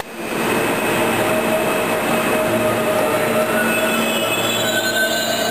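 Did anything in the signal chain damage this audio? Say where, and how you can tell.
Yes. An unreliable data bit at the converter flips randomly, adding equal spikes of about -28 dBFS, heard as steady crackle from 3.67 to 4.17 s.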